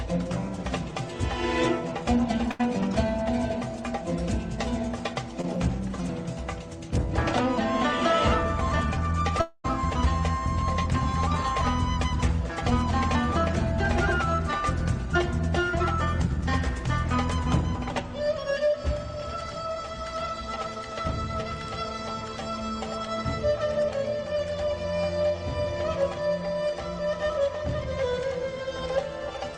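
At 2.51 to 2.61 s, a burst of packet loss: a short run of packets failed to arrive in time, and the receiver bridged the hole by extending the last sound it had for roughly 80 ms while lowering its level. This is heard as a held, fading buzz or hiss in place of real content. When the stream picks up again, about 80 ms of the original audio has simply been skipped.

Between 5.41 and 5.45 s comes a short concealed packet loss. About 20 ms of data missed the decoder, which synthesised a stand-in from the preceding sound and then crossfaded back into the genuine signal. The result is a brief smear or wobble, so quick it can pass as a small stumble in the audio. Roughly 20 ms of real content is gone, enough to swallow a very short sound entirely.

From 9.41 to 9.66 s, the sound behaves like a long network dropout, the likely cause being a stretch where no packets arrived at all. The receiver carries the last sound forward as a buzz or hiss that fades over about 230 ms, with the final 70 ms or so falling into silence. 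The audio then resumes further along, having lost about 220 ms of what was sent.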